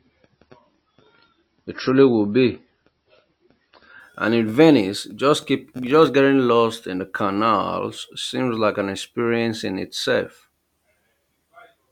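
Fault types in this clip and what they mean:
Adaptive stream starting at a low bitrate: For the first 4 s the speech sounds dull and smeared, with nothing above 5.8 kHz, then abruptly clears with no gap. The player opened on a cheap encoding, fitting 24 kbit/s MP3, then switched to one fitting 128 kbit/s.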